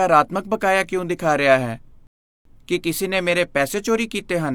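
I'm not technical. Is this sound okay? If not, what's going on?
No. At 2.07 seconds the speech stops dead and goes silent until 2.45 seconds. This is a rebuffering stall. The player ran out of downloaded audio and waited for more. The speech then picks up exactly where it stopped. Nothing is missing, but 0.38 seconds of dead air is added.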